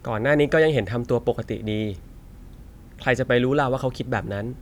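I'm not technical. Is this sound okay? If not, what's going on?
Yes, this speech recording is technically sound, with no faults to be heard anywhere in it.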